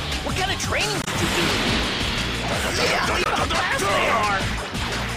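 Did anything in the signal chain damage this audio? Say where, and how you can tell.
Yes. Two short disruptions break into the audio, one from 1.02 to 1.08 s and another from 3.24 to 3.27 s, each lasting only a few tens of milliseconds. This is damaged data in a compressed stream, at the codec stage. Corrupted bytes in the encoded file made the decoder misread those frames and lose sync until it found the next valid frame header, so the real signal was briefly lost.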